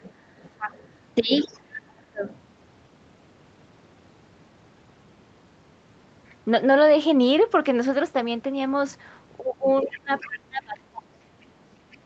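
Speech clip with two call-echo faults. The other side's voice leaks through faintly, roughly 15 to 30 dB below the talker, at 0.01–1.6 s, 2.27–2.39 s, 9.92–10.39 s and 11.92–11.98 s, likely from loudspeaker echo the canceller failed to remove. Speech is suppressed in double talk from 0.58 to 2.24 s and from 9.39 s to the end, with dips of up to about 30 dB, likely because the echo canceller turned both voices down during overlap.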